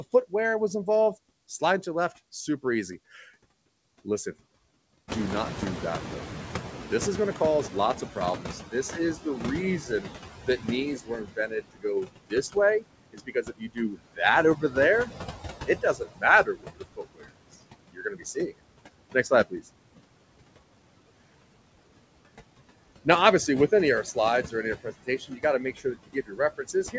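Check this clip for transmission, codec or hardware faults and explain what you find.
The faults here come from the noise suppressor in the call's processing chain, not from the transmission or hardware. The room noise jumps by about 18 dB near 5 s, and the audio stops at 8 kHz, which fits a G.722 wideband call path.

Noise suppressor artifacts, throughout: the suppressor lowers bands it judges to be steady noise by about 20 dB, frame by frame. The leftover background sinks between phrases and rises under the words. On a spectrogram the noise floor looks blotchy and speckled rather than smooth.

Noise suppressor catching up, 5.08 to 10.28 s: after the noise rises, the suppressor's estimate takes about 5.2 s to adapt. The louder noise first comes through with less reduction, then sinks by about 15 dB. A waveform shows the floor jumping and then slowly shrinking.

Speech cut by the noise suppressor, at 7.72–9.25, 9.81–15.1, 15.67–17.3, 17.93–18.56, 19.13–19.61 s and from 23.04 s to the end: the suppressor mistakes parts of the speech for noise and turns them down by up to about 21 dB. 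The affected parts sound swallowed or faint, adding up to about two seconds in the longest stretch. Spectrograms show holes punched into the speech energy.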